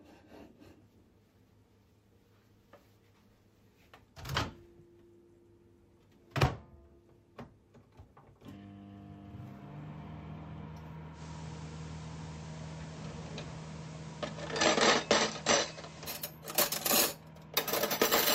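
At 11.12 s the receiver loses its digital signal and performs a digital radio blending to analogue, cross-fading over about 108 ms to the FM broadcast of the same station. The level shifts by about 1 dB. A layer of hiss, roughly 20 dB below the signal, rises underneath and stays until the receiver blends back to digital at 16.17 s.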